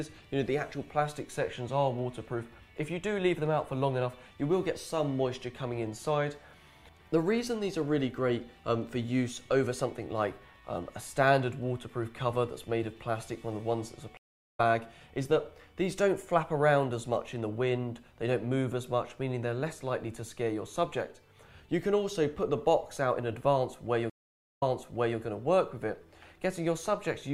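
At 14.17 s a stream reconnect silences the audio for 363 ms, which resumes roughly 0.4 s later. At 24.10 s another reconnect leaves 465 ms of silence, then restarts 627 ms earlier, repeating material. Unlike a plain dropout, each gap shifts the playback position.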